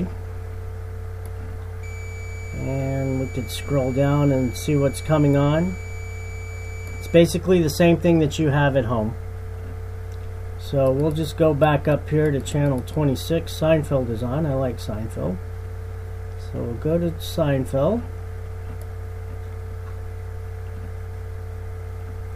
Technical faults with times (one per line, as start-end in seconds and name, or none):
1.83-7.16 switching supply whistle